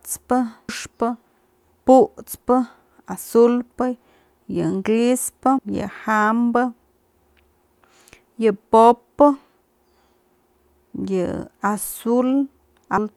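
Compressed frames skipped: whole frames never reach the output, dropped as missing or damaged, so the speech jumps ahead. At 0.69 s roughly ten frames vanish, about 400 ms of speech; at 5.58 s, just after "yën grispë", around 200 ms goes; at 12.98 s, around 300 ms.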